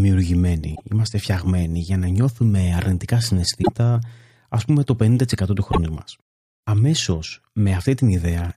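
Damaged data in a compressed stream at 0.72–0.82 s (before "είμαστε φτιαγμένοι για να"), 3.59–3.69 s (after "για να νιώθουμε αρνητικά") and 5.68–5.78 s: corrupted frames make the decoder lose sync, giving brief glitches.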